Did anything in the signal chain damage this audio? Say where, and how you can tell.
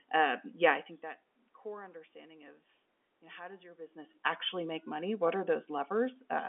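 No, nothing in the chain has damaged this speech. It has the narrow sound of a fixed-line G.711 telephone path, with the band running from about 250 Hz to 3.5 kHz and nothing above 3.7 kHz, while the room's own background noise and the level shifts near 0.5 s and 4.0 s, where the talker moved relative to the microphone, belong to the recording itself.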